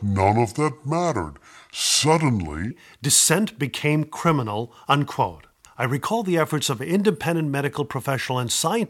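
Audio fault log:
0.00–2.71 s, section at the wrong speed: speech at 0.75x speed, about five semitones low, before "dissent became criminal unquote"; likely a wrong playback clock.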